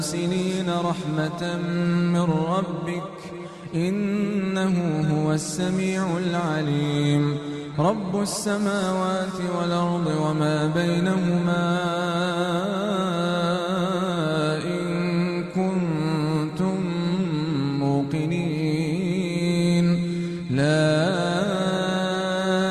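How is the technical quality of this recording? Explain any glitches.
There's one glitch worth flagging, a drift correction step from 6.66 to 7.74 s. For just over a second the audio slows by about 5.4% and drops roughly 96 cents, very nearly a semitone flat, then snaps back to normal speed and pitch. That pattern likely comes from clock-matching software nudging the playback rate in a single jump to rebalance its buffer, so speed and pitch move together rather than independently.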